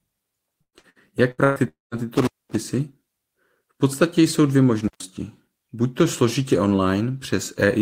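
Speech, hit by three kinds of fault. From 0.61 to 1.59 s there is repeated packet loss with a robotic, choppy sound. Five gaps, the longest 120 ms, are patched by repeating the last sound, so about 42% of that stretch is synthetic. On a spectrogram this shows as smeared, repeated harmonic slices between normal frames. From 1.68 to 2.07 s a long network dropout is the likely cause: about 240 ms of audio is lost. The last sound carries on as a fading buzz, then about 170 ms of near silence follows before speech resumes with a jump. The waveform shows a decaying tail into a flat gap. Intermittent contact cuts the line from 2.18 to 2.56 s, open for about 222 ms, and again from 4.84 to 5.04 s, open for about 127 ms, right after "podstatě jsou dvě". Each cut starts and ends with crackle and leaves only faint hiss. In the waveform these look like abrupt drops bounded by sharp spikes, and on a spectrogram as vertical broadband clicks on either side of a low noise floor.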